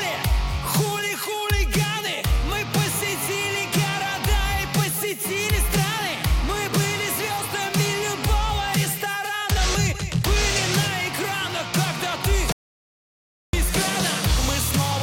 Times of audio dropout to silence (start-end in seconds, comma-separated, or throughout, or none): 12.52-13.53